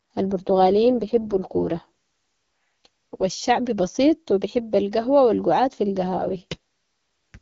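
From 0.38 to 3.24 s, just before "الشعب بسيط و بحب", and again from 6.08 to 7.38 s, after "القهوة و القعاد في", an AMR rate drop starves the codec of bits. The speech turns rough and synthetic, with no band loss or gap, which fits a fall from 12.65 to 6.6 kbit/s in AMR-WB.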